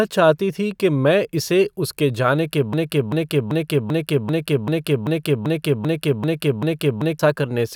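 At 2.73 s, just after "इसे उसके जाने के", the speech falls into a broken-record loop. A fragment of about 0.39 s repeats back to back, exactly the same each time, 11 times over. It runs until 7.19 s. The passes follow one another, giving a stuttering, mechanical rhythm. The speech that belonged in those four and a half seconds never plays. The likely cause is a stalled player or stream that kept resending the last piece it held.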